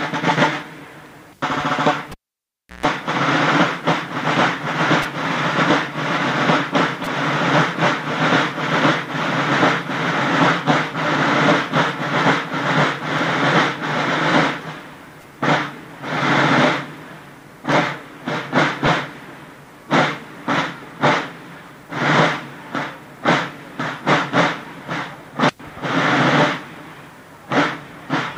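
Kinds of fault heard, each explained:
Cable pulled and plugged in: at 2.12 to 2.86 s a live lead breaks with a pop, then near silence, a 0.14 s burst of 60 Hz mains buzz, and another pop.
Lost LE Audio frames: at 18.86 s one 10 ms frame drops out, and the decoder fills it from the previous spectrum with scrambled signs, leaving a brief noisy smear.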